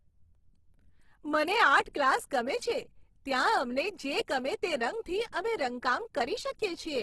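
Heavy low-rate coding runs through the whole clip, most likely Opus compression in its music (CELT) mode at a bitrate that sounds near 12 kbps. With so few bits, the encoder keeps each band's overall energy but fills in detail by copying lower bands or inserting noise, so the speech comes across grainy and rough rather than swirly. Nothing is present above about 12.2 kHz, leaving the top end dull.

At 1.93 s a pre-echo appears. The codec spreads its quantisation noise evenly across each transform block, and here a sharp onset lands late in one. The noise meant to be masked by that loud attack also fills the quiet stretch just before it, so a brief hiss of about 11 ms leads in and the attack itself sounds softened and smeared.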